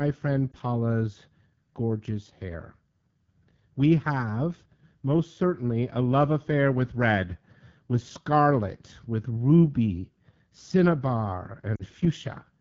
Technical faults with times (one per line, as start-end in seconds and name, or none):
0.00-12.61 AMR wideband (HD Voice) codec
0.52-0.57 lost AMR speech frames
11.75-11.84 lost AMR speech frames